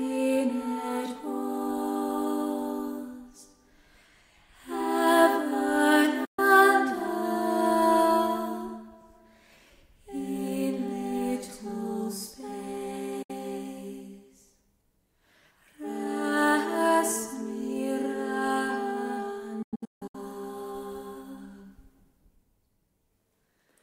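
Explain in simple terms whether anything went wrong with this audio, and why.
Digital broadcast dropouts at 6.25–6.39 s, 13.22–13.30 s and 19.62–20.15 s: the receiver lost clean data and briefly muted, so the sound quickly fades out and returns. The last one breaks into several short gaps, and whatever was broadcast during them is gone.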